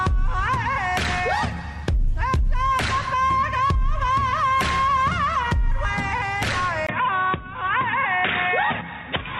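At 6.87 s the sound drops out for about 20 ms. It then returns duller and boxier, and stays that way to the end at 9.40 s. This is an input switched to a poorer device, likely a change to another microphone or a headset's call profile. Nothing above 3.8 kHz survives after the switch, so the top end is gone. A faint new background noise appears, far below the signal. The loudness barely changes.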